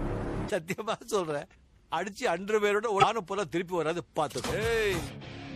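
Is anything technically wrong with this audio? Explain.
Yes, two things. Throughout, the sound has a watery, swirly quality with dulled treble and smeared attacks, most likely from MP3 compression: short on bits, the encoder drops the top end and lets weak frequency lines flicker on and off, which fits a rate around 64 kbps.

Then there are two brief glitches, at 0.46 to 0.50 s and 2.99 to 3.04 s, from damaged data in the compressed stream. The decoder misreads the corrupted frames, loses sync and hunts for the next header, so you hear a quick break in the sound.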